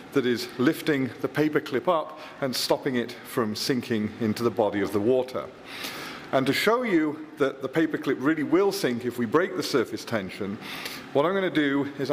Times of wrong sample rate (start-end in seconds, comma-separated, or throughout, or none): none